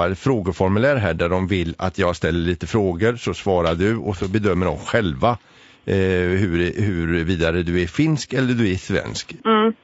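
Low-delay AAC compression runs through the whole speech clip: the voice sounds rough and grainy, with noise filling the gaps between harmonics. This is likely AAC-ELD, whose short frames resolve pitch harmonics poorly, and the damage fits a bitrate around 32 kbps.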